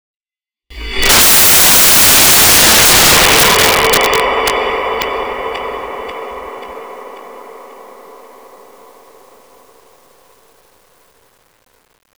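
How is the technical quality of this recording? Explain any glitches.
Poor: from 0.70 s to the end, the sound turns into loud broadband noise, because the samples are built from the wrong bytes, letting the rapidly changing low bits dominate each value.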